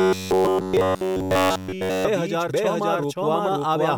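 From 0.01 to 2.06 s the speech becomes a rigid metallic buzz near 93.8 Hz, robotic sound from repeated short buffers, likely one roughly 10.7 ms block replayed almost continuously. Throughout, a doubled audio track is audible: a full-band copy at about equal level trails roughly half a second behind, likely a second, slower capture path mixed in.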